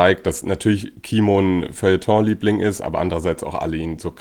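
Nothing stood out on listening to this speech.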